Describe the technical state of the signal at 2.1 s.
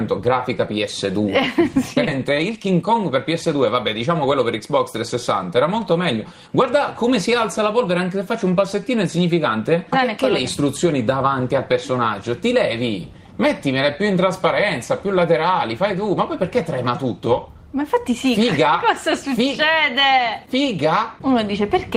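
At 2.07 to 2.09 s the playback makes a skip ahead: roughly 0.7 s of sound never arrives at the listener. The audio was dropped in transit or discarded because later audio was already queued, and the two sides are butted together with no fill. Unlike a dropout or concealed packet loss, there is no silence, fade or smeared patch; the sound simply resumes further along, so the listener hears an abrupt jump in continuity rather than a hole.

From 2.17 to 4.60 s a jitter buffer speed-up follows. The receiver still held more audio than it wanted and trimmed short pitch-period-sized pieces again and again, discarding around a fifth of a second in total. The sound runs at about 108% of normal rate while its pitch stays put, giving a rushed, slightly compressed feel. That fixed pitch distinguishes it from a resampling or clock-drift speed change, which would raise the pitch along with the tempo.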